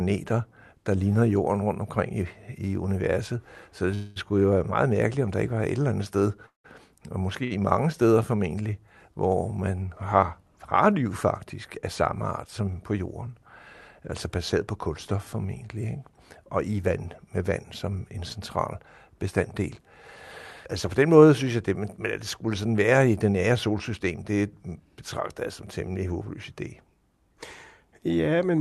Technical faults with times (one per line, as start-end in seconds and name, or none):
3.94-4.18 call audio freeze
6.46-6.66 call audio freeze
7.44-7.53 short stall from a late packet
12.60-12.99 jitter buffer speed-up
17.95-19.82 jitter buffer speed-up
20.84-21.99 jitter buffer speed-up
28.32-28.61 jitter buffer speed-up